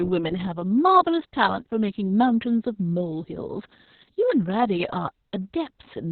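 Throughout, the speech has Opus voice compression at a very low bitrate, which fits about 6 kbps, coded by the SILK linear-prediction coder in narrowband, leaving nothing above 4.4 kHz. The narrow band and coarse excitation make the speech heavily muffled, hoarse and slightly robotic.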